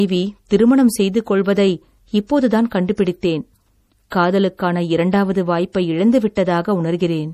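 From start to finish the speech carries plainly audible codec damage, most likely MP3 compression at a low bitrate, with the sound pointing to something near 40 kbps. Nothing survives above 15.1 kHz, so a spectrogram shows a flat ceiling there, and below it weak components flicker on and off between frames as scattered holes and specks. The result is a watery, swirling texture, with chirpy sibilants and softened consonant attacks.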